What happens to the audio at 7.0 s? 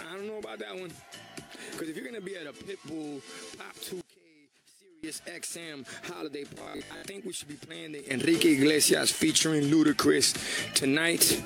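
The sound turns into a rigid, metallic buzz at 50 Hz from 6.55 to 7.05 s: robotic sound from repeated short buffers, likely from audio arriving too seldom, so a 20 ms slice repeats in place of most of the real signal.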